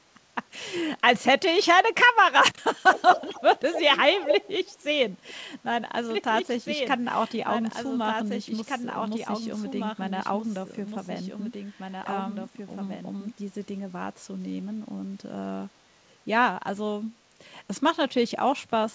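A speech recording that has passed through a call path whose audio stops at 8 kHz, consistent with G.722 at 64 kbps, carries two distinct kinds of fault. From 2.93 to 3.98 s and again from 4.15 to 4.77 s there is an echo leak: a copy of the speech returns 215 ms late, about 10 dB down in the first stretch and roughly as loud as the speech in the second. The likely cause is a far-end loudspeaker whose echo canceller let part of the microphone pickup back into the call. From 6.10 to 13.32 s the fault is a doubled audio track. A second full-band copy runs about two seconds behind, around 5 dB quieter, and it switches on and off abruptly at those edges, likely because an edit or a slower capture path mixed the same audio in twice. The two are told apart by their timing and behaviour. The echo appears only in short bursts at a short, fixed lag. The doubled track persists steadily for over seven seconds with no room colour and a far longer offset.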